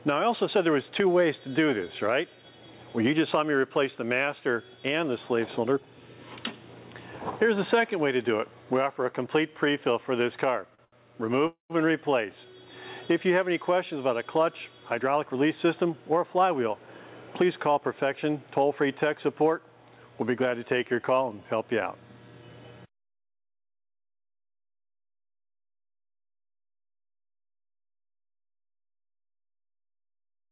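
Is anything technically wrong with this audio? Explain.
Yes. From 10.70 to 10.94 s there are repeated stalls (stutter): three brief waits, longest 77 ms, where the last sound is stretched to cover late packets. Unlike a freeze, it's several short hitches, not one pause.

At 11.47 to 11.72 s a call audio freeze holds the last sound for 227 ms, fading to about 120 ms of silence, then resumes where it stopped. The likely cause is a single long packet delay.

Jitter buffer speed-up trims pitch-period-sized pieces to shed built-up delay, so tempo rises while pitch stays put, which separates it from a sped-up recording. From 14.99 to 17.95 s the audio runs at 105%, losing about 150 ms. From 22.28 to 22.86 s it rushes at 113%, losing about 70 ms.

The call path's 4 kHz bandwidth limit is audible throughout.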